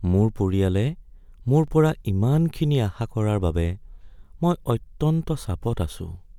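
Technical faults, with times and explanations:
1.68 s and 4.19 s, overlapping chunks: the speech was handled in blocks about 2.5 s long, and each new block began slightly before the previous one finished, so about 13 ms of audio plays twice at each join. That doubled sliver breaks the waveform's continuity and is heard as a brief click or tiny stutter, once just before "পৰা ইমানখিনি আশা কৰাৰ" and again right after "ইমানখিনি আশা কৰাৰ বাবে", spaced exactly one block apart.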